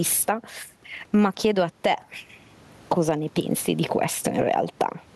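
Throughout the speech, the room noise sits about 39 dB down, and there is gain pumping, likely from excessive gain into a fast limiter, swinging around 10 dB.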